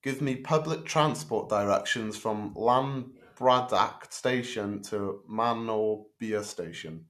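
Speech recording, with no technical faults heard anywhere in it.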